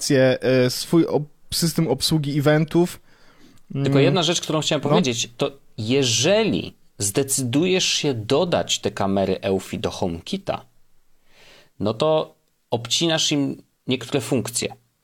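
Nothing stood out on listening to this speech recording.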